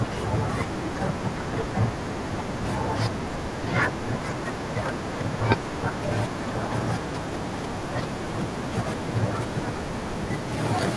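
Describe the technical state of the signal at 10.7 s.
At 10.7 s the speech signal is intact, with no audible fault at that point.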